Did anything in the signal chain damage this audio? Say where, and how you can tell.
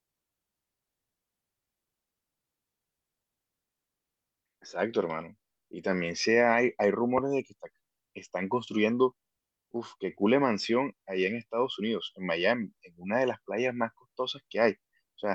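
No, nothing audible points to damage at any stage of the chain in this speech recording.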